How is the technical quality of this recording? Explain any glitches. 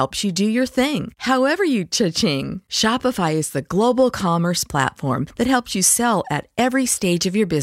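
Nothing here trips me up; I can't pick out any glitch anywhere in this speech recording.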